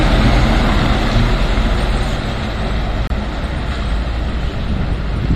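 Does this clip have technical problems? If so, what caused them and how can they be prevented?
Yes, there's a gap between stream segments at 3.07 to 3.10 s: a hard-edged hole of silence, about 28 ms long. Two segment timestamps didn't quite line up, so the player padded with silence without losing any audio. Keeping segment timestamps contiguous at the packager prevents it.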